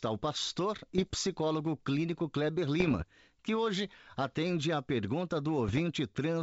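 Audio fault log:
0.98–1.16 s, 2.80–3.04 s, 5.68–5.81 s: bit errors on an ADPCM link. Pops and rough, gritty bursts with brief level jumps. Each flipped bit corrupts the decoder's step size and predictor, so the damage rings on for milliseconds. The density suggests an error rate of roughly 0.5 to 0.7 percent.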